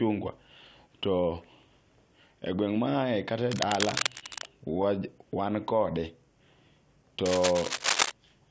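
From 3.50 to 4.51 s, cable scratch noise runs over the speech at roughly the same loudness as the talker: dense, irregular crackle and rustle, likely from a worn cable or connector being moved so its contact resistance jumps about. On a waveform it shows as ragged spiky bursts riding on the speech envelope. On a spectrogram it appears as broadband vertical smears that reach up to the 8 kHz ceiling set by the wideband call codec.

Inside that scratch, from 4.19 to 4.24 s, there is a short stall from a late packet. The jitter buffer ran dry, so the receiver stretched the last sound for 26 ms and then resumed exactly where it had stopped. Nothing is lost, but the sound is held slightly too long, and everything after it lands 26 ms later. A spectrogram shows a brief frozen, horizontally smeared patch. The waveform shows a short stretch of repeated cycles.

The same scratch noise returns from 7.25 to 8.12 s, with the same broadband crackle pattern and a similar level.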